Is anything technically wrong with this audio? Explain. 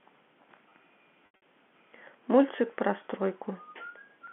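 Yes, there are two kinds of fault in this telephone-band speech.

Repeated buffer, at 0.69 s and again at 2.56 s: each event lasts about 20 ms. The same short block plays twice more with hard joins, which fits a 10 ms buffer arriving late. Because the piece is so short, each event sounds like a brief buzz or click rather than a stutter.

Packet loss with pitch repetition, from 1.26 to 1.42 s: 140 ms of audio goes missing in gaps spread over 160 ms. The longest gap is 80 ms. The receiver bridges each gap by repeating the last pitch period. The shorter gaps sound held and buzzy. The 80 ms run fades toward silence before the speech returns through a short cross-fade.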